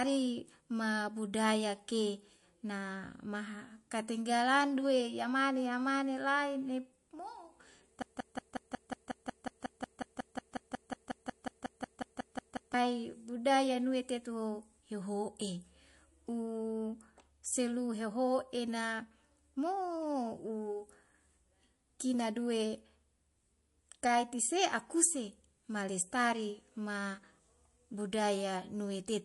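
Throughout, the speech sounds plainly watery and swirly, likely from MP3 compression at a bitrate around 48 kbps. A spectrogram shows a flat ceiling at 11.3 kHz and flickering gaps.

From 8.02 to 12.74 s, a broken-record loop repeats a 0.18 s fragment 26 times. The waveform shows identical blocks back to back, and the audio meant for that span is lost.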